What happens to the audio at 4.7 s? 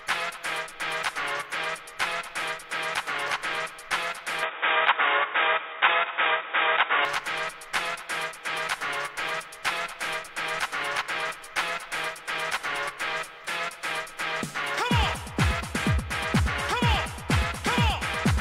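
At 4.7 s the recording sits inside a stretch, from 4.43 to 7.05 s, where the input was likely switched to a poorer device. That device passes a narrower band, with nothing above 3.8 kHz, so the sound turns dull and boxy. It also brings its own tone, a level shift of around 5 dB, and a new noise floor roughly 30 dB below the signal. The change happens without any gap at the switch.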